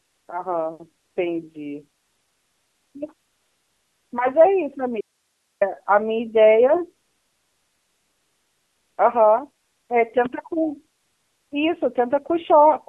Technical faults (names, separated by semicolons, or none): AMR narrowband mobile codec; AMR comfort noise; audio dropout to a faint residue